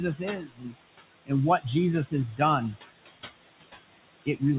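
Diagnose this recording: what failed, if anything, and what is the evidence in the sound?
Throughout, the background ducks away between phrases and swells back under the speech. These are noise suppressor artifacts at the call-processing stage: the suppressor pulls bands it judges to be steady noise down by about 21 dB, frame by frame.

From 0.4 to 0.76 s, the speech itself turns faint and swallowed, sinking by up to about 20 dB. This is speech cut by the noise suppressor: the same call-processing stage mistook this part of the speech for background noise and attenuated it along with the noise.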